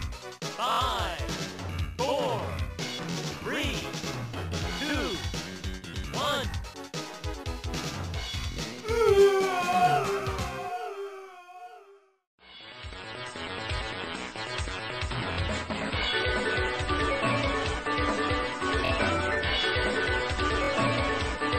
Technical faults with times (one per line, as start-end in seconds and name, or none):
0.72-0.79 repeated buffer
3.11-3.16 repeated buffer
4.74-4.76 repeated buffer
8.52-8.57 repeated buffer
13.77-13.79 repeated buffer
15.33-15.37 repeated buffer
18.85-18.90 repeated buffer
20.64-20.69 repeated buffer